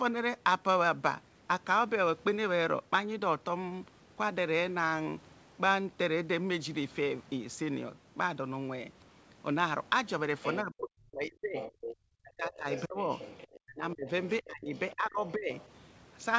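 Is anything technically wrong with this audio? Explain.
Yes. From 10.08 to 10.62 s, 11.58 to 11.96 s and 12.54 to 15.66 s, the other side's voice leaks through. The likely cause is an echo canceller that left part of the loudspeaker playback in the microphone signal. A second voice sits roughly 10 to 15 dB below the talker.

From 10.62 to 11.59 s, 12.21 to 12.99 s and 13.62 to 15.52 s, the talker's speech is suppressed in double talk. This is likely because the canceller could not tell the talker from the echo and turned both down. The voice dips by some 30 to 40 dB.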